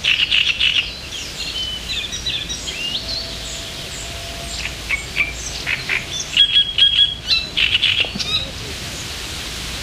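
Sound recording, no audible technical faults found.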